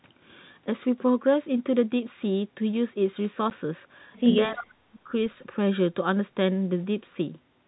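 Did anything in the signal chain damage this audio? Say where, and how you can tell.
Yes. At the network stage, packet loss filled with silence leaves a single 10 ms hole at 3.50 s. On the waveform it is a flat gap with abrupt edges, and the spectrogram shows a thin vertical blank where the waveform drops to and returns from silence.

In call processing, speech is suppressed in double talk from 4.47 to 5.12 s, with level dips reaching roughly 40 dB. This is likely the echo canceller mistaking simultaneous talk for echo and ducking it. The waveform envelope collapses in patches, and the spectrogram thins to faint or missing energy across that stretch.

Also in call processing, an echo leak appears from 4.56 to 4.65 s as a faint copy of the speech arriving 312 ms late, about 15 dB below it. This is likely residual loudspeaker pickup that the canceller failed to remove. The spectrogram shows weak, repeated harmonic traces offset in time from the originals.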